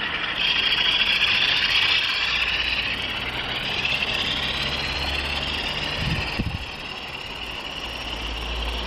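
Nothing in this audio comes across as a technical fault; it just runs along steadily with no glitches to point at.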